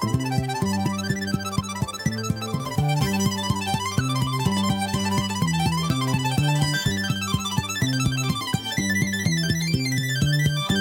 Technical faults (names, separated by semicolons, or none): audio read two samples at a time (double speed)